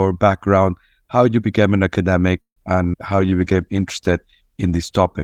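At 2.41 s, right after "you became an academic", a call audio freeze interrupts the speech for about 0.18 s. The last sound is carried on briefly as a fading buzz or hiss and then goes silent for about 110 ms before the speech resumes exactly where it stopped. Nothing is lost; a gap has simply been inserted. That separates it from a skip. The cause is likely packets held up in transit until the jitter buffer ran dry.

At 2.92 s comes a skip ahead, still following "you became an academic". Here the speech jumps forward with almost no gap, only about 11 ms of fill, and roughly 70 ms of speech is gone. The two sides are butted together, producing an abrupt lurch rather than a pause. Dropping already-queued audio like this pulls the delay back down.

From 3.16 s to 3.54 s a jitter buffer slow-down stretches the speech. Single pitch periods are repeated to rebuild a reserve, adding 53 ms so that this stretch plays at about 89% speed. 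The pitch stays the same while sounds are drawn out. That is what separates it from the freeze: the speech keeps moving, just slower, instead of stopping.

Overlapping it, from 3.21 s to 4.97 s, a call bitrate drop takes the encoder from 48 kbps down to 17 kbps, where it stays for about 1.6 s. The coarser coding makes the speech rough and watery, and the high frequencies are trimmed away, so it sounds muffled. Unlike the timing faults, nothing is added or removed here; only the quality degrades until the bitrate recovers.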